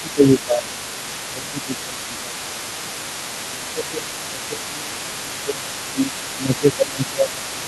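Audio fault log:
throughout, other side's voice leaking through: a second voice sits about 15 dB under the talker, likely an incompletely cancelled loudspeaker echo; a spectrogram shows faint harmonics between and beneath the main ones.
0.02–3.04 s, 3.48–5.76 s, 5.93–6.13 s and 6.35 s to the end, speech suppressed in double talk: the talker's voice dips by up to about 15 dB (about 10 dB in the short 5.93 s dip), likely the echo canceller ducking both voices while they overlap. The waveform shows sagging envelopes in those spans.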